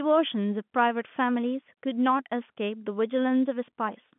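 No technical faults can be heard in this speech recording. It arrives over G.711 telephone coding, so the sound is held to the narrow line band of 150 Hz to 3.5 kHz, with nothing above 3.8 kHz and at most a faint trace of the codec's level-following quantisation noise.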